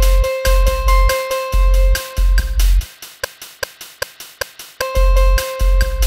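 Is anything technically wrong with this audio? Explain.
Yes. From 3.24 s to 4.81 s the audio falls into a broken-record loop: a fragment of about 392 ms plays four times back to back, each pass identical, before normal playback resumes. The likely cause is a stall in the player, encoder or stream, during which the last buffered fragment was re-sent instead of fresh material. The result is a stuttering, mechanical repetition, and the audio that belonged in that span is missing.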